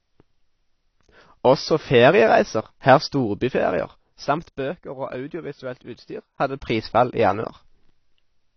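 From the start to the end of the speech, nothing comes through above 6 kHz, and the damage is plainly audible: consonants and sibilants sound dull and smeared, with a watery, fizzy texture. The likely cause is AAC compression, with AAC-LC at a low rate (the sound fits roughly 24 kbps) cutting the top band and coarsely quantising what remains. A simple low-pass filter would only darken the sound, without the warble in the remaining band.

From 6.28 to 6.76 s, the level changes by roughly 10 dB in steps of 1 dB, about 30 a second, with no smoothing between them. This is zipper noise: each jump leaves a small click, heard as a rapid, even ticking on the sound while the level moves. Smoothed, fader-style level changes would glide without any ticking, and stray clicks would be scattered rather than tied to a level change.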